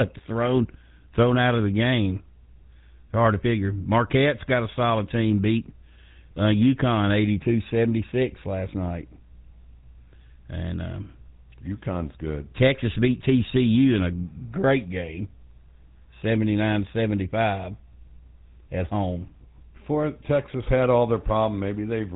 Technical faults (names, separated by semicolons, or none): GSM full-rate codec